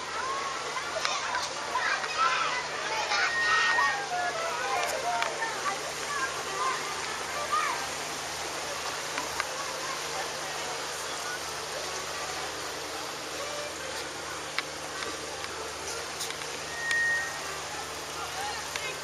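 Loudspeaker feedback squeal at 3.07 to 4.12 s and again at 16.59 to 17.59 s: the microphone hears its own loudspeaker, loop gain passes one at 1.9 kHz, and that tone swells in under half a second to a piercing whistle well above the surrounding sound, somewhat softer the second time.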